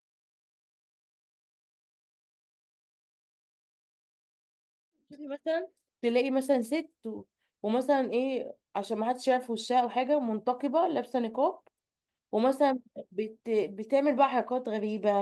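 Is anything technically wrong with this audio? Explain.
No, nothing in this speech recording points to a technical problem. The level rises in a smooth fade-in, beginning around 5 s and reaching full level at 6.17 s, with no click or hard edge at its start.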